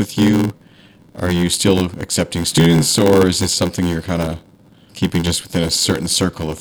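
From start to finish the speech carries a steady buzz at 86.1 Hz, the signature of a block size mismatch (padded). One stage hands over blocks shorter than the next stage reads, so every block ends in a short stretch of zeros. That fits a 512-sample read block. The speech runs at 0.861 times normal speed while its timbre holds steady. A sample-rate error would shift pitch along with speed, and mains hum would not slow the delivery.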